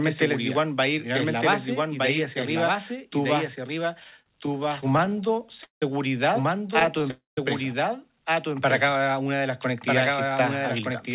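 Speech, heard through a narrowband call path with nothing above 4 kHz, which fits G.711 A-law at 64 kbps. Throughout, the sound is doubled. A second full-band copy trails about a second behind, some 5 dB quieter. It has no reverb or room colour, so it is not an echo. This doubled audio track likely comes from the same signal being captured twice, once through a slower path. From 4.0 to 5.83 s, right after "hacia arriba tú vas", there are repeated stalls (stutter). The receiver's jitter buffer kept running dry. Each time it stretched the last sound until new packets arrived. The gaps are many and short, the longest 180 ms. About a quarter of that span is filled in. Nothing is lost, but the speech drags and stutters. A second, lighter stutter runs from 6.68 to 7.05 s. Its gaps are tiny, none longer than 13 ms, yet they still roughen the flow. At 7.11 to 7.38 s comes a call audio freeze. The sound hangs, fades, then drops to near silence for about 160 ms. 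Speech resumes where it stopped, 265 ms later than before. Packets held up on the way are the likely cause, emptying the buffer. From 8.48 to 9.05 s, just before "una de las", a jitter buffer slow-down stretches the speech. The receiver repeated single pitch periods or bits of pauses to rebuild its reserve. It adds 43 ms and plays at 94% speed. Pitch stays the same, but sounds are drawn out.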